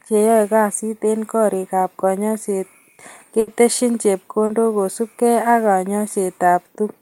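At 3.39 s a burst of packet loss leaves about 80 ms of audio that never arrives. The receiver carries the last sound forward and lowers its level through the gap, giving a held buzz or fading hiss until 3.49 s. Playback then resumes further on, with that stretch skipped. At 4.45 s a short concealed packet loss removes about 40 ms. The decoder extends the preceding sound, from its pitch or as shaped noise, and blends back in by 4.51 s, leaving a brief smear.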